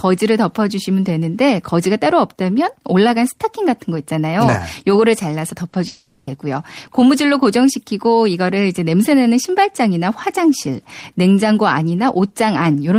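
At 5.69 s to 5.75 s the speech shows a short concealed packet loss: about 40 ms of audio failed to reach the decoder in time, and the receiver bridged the gap by extending the preceding sound before crossfading back into real audio. It comes across as a brief smear or wobble in the speech, with the true content of those 40 ms replaced rather than heard.

From 5.87 s to 6.29 s a longer stretch of about 400 ms is replaced by synthetic continuation. The last sound is drawn out as a buzz or hiss that fades but never drops to silence before the speech resumes further on, with the original material from that interval absent. The length and character point to a long network dropout as the likely cause, with concealment covering the entire gap.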